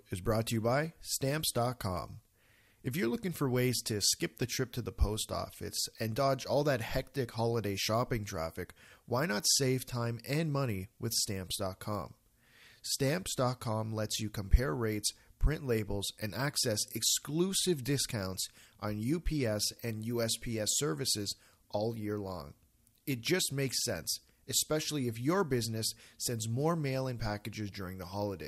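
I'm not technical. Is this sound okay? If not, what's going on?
No. Weak digital radio reception let data errors slip past correction, causing DAB burbling: brief noisy blips after "is brought" (0.48–0.52 s), after "for ways to skip" (4.42 s), and after "sends more mail in" (27.69–27.75 s).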